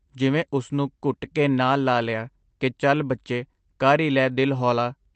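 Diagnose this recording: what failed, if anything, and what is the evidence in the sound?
Faint, uneven timing hiccups recur throughout: clock drift between sender and receiver, with the sender's clock roughly one and a half percent slow, starving the jitter buffer.

From 0.64 to 4.86 s the speech drags slightly at 98% speed. These are repeated timing corrections, as the receiver's buffer stretches the audio to add roughly 70 ms.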